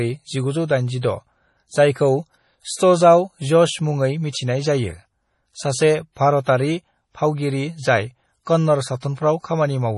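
Heavy MP3 compression runs through the whole clip, likely from a low bitrate around 32 kbps. Nothing sounds above 11.4 kHz. Weak frequency lines drop in and out between frames. The speech sounds watery and swirly, with metallic chirps on s sounds and smeared attacks.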